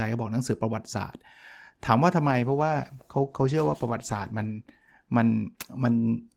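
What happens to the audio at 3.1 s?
That's right in the middle of a call bitrate drop running from 2.24 to 5.93 s. The bandwidth estimate fell and the encoder got starved, and the rough, muffled, watery coding fits a cut from 32 to 15 kbps, with the worst stretch lasting about 2.4 s.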